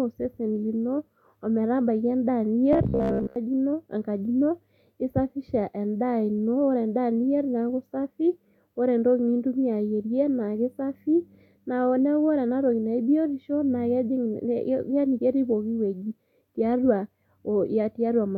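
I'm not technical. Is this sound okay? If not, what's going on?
No. From 2.73 to 3.36 s the speech turns into a steady metallic buzz. That's robotic sound from repeated short buffers: tiny 15 ms snippets repeat instead of dropping out silently, likely because the audio arrived too slowly.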